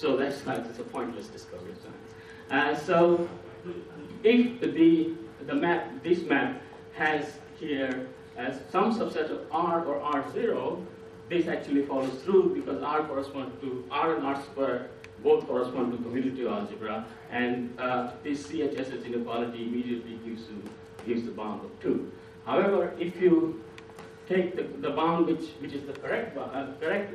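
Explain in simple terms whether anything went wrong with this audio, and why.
Nothing went wrong with this audio; no faults can be heard anywhere in it.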